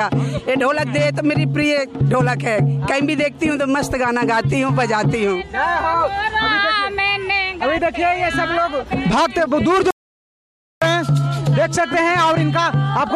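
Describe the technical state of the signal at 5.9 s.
At 5.9 s the signal is intact, with no audible dropout, distortion, clipping or other technical fault at that moment.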